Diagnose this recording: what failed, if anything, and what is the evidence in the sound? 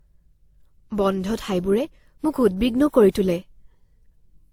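The codec stage is where it went wrong: the speech carries two layers of compression artefacts mixed together from start to finish, the signature of transcoding between lossy codecs. It sounds like a low-rate Opus pass, likely re-encoded through WMA at a much higher rate, with nothing above 20.1 kHz.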